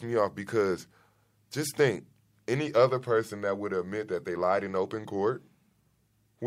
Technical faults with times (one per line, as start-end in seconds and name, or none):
none